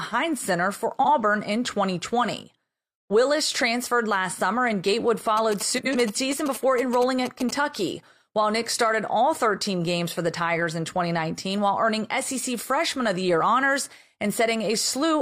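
Just after "center for", from 1.00 to 1.08 s, there are frames out of order: two adjacent blocks of roughly 43 ms were decoded in swapped order, which fits single-frame runs exchanged in transit. The stretch flutters and garbles. Unlike a dropout or a repeat, nothing is missing and nothing plays twice; the same sound is simply rearranged.

From 5.37 to 7.51 s come GSM signalling bursts: a nearby 2G phone's intermittent radio transmissions, rectified by the audio circuitry. They form a galloping dit-dit-dit of short 217 Hz buzzes, about 10 dB below the speech. A steady mains hum would be continuous, while this comes and goes in rhythmic clusters. Within it, from 5.77 to 5.96 s, a second frames-out-of-order swap exchanges two blocks of about 85 ms, which points to two frames each. It adds a longer garbled flutter.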